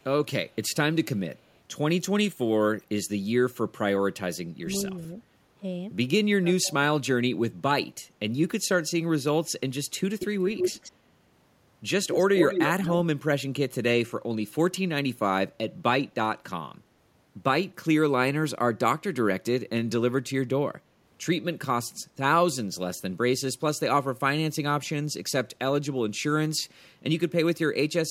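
Speech, with a delayed copy of the talker at 1.48–1.57 s, 10.19–10.27 s, 10.47–10.92 s and 12.04–12.95 s. This is echo leak, likely from a far-end echo canceller letting loudspeaker pickup through. The first echo trails by about 209 ms and is very faint. Later echoes trail by about 183 ms, rising from roughly 10 dB down to about speech level. The speech also dips at 4.63–4.68 s, 4.95–5.12 s, 6.32–6.82 s and 7.02–7.06 s. The drops range from slight to roughly 25 dB, deepest at 6.32 s. This is speech suppressed in double talk, likely the canceller ducking the talker while both sides spoke.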